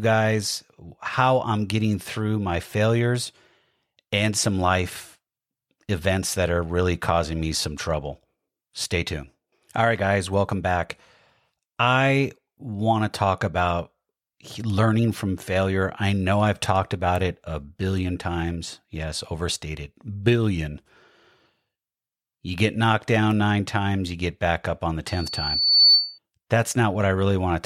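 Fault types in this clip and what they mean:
Loudspeaker feedback squeal: the microphone picks up its own loudspeaker, and one frequency keeps growing around the loop. Just after "back up on the", a 4.5 kHz tone swells from 25.07 to 26.19 s. It builds in under a second, reaching about 10 dB above the speech.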